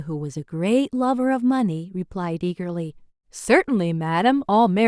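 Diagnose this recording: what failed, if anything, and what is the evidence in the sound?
Nothing failed; no stage shows any audible fault here.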